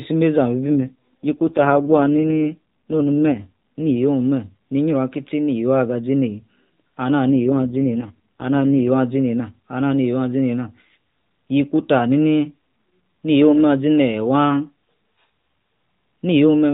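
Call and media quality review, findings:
AMR rate drop, 0.78–3.97 s and 7.31–8.90 s: speech goes rough and synthetic with no gap, then recovers. Fits the narrowband mobile codec falling from 12.2 to 4.75 kbps on a weak link.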